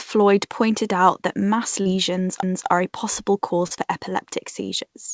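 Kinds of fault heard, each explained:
CD skip: A sharp tick at 2.42 s, with a near-silent break of only a couple of milliseconds, after which the speech resumes from a different point. A knock or disc flaw made the laser jump to another turn of the spiral.
Short concealed packet loss: Between 3.67 and 3.72 s the speech briefly smears and wobbles. About 20 ms of audio reached the decoder too late, so the receiver extended the preceding sound over 30 ms before blending back into the real signal.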